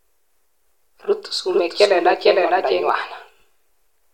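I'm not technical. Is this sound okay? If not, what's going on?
No. From about 1.50 to 2.90 seconds there's a doubled audio track: a second, equally loud copy of the speech trails about half a second behind, then cuts off abruptly. It's likely a second capture path or an edit leaving two copies out of step.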